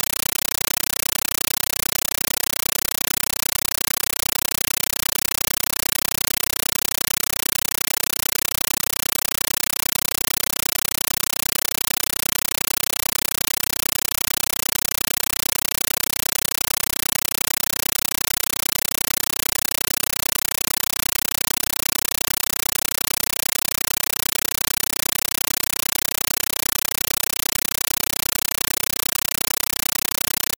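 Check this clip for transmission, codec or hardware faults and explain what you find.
One fault runs through the whole clip. Compressed stream played as audio, throughout: undecoded data, pointing to AC-3, is played as samples, giving loud chattering static in 9.33 ms bursts, 31.25 times a second.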